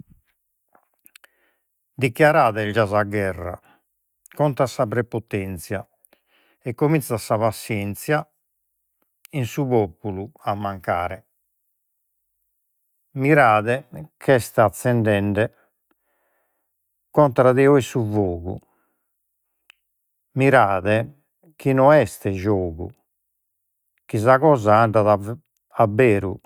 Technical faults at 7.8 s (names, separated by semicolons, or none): none